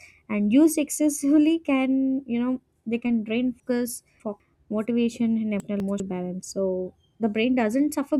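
Chunks out of order at 3.6 to 4.4 s, after "know they can drain": a 200 ms chunk plays three chunks late, jumbling the sound at three hard joins. At 5.6 to 6.0 s, after "motivation and", one chunk lands a single step late. The waveform shows abrupt steps at each join.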